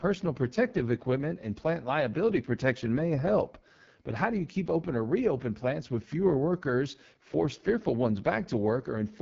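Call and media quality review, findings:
AMR wideband (HD Voice) codec, throughout. Rough, raspy speech; bandwidth ends near 7.3 kHz. Heavy damage fits the lowest AMR-WB mode, around 6.6 kbit/s: pulse-driven vocal tract model starved of bits, top band filled with shaped noise.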